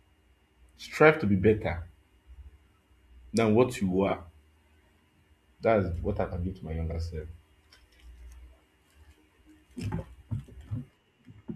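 Around 4.07 to 4.13 s, and again from 6.89 to 6.95 s, there's frames out of order: two neighbouring blocks of about 26.1 ms each got swapped, so the speech briefly flutters and stumbles, but no time goes missing.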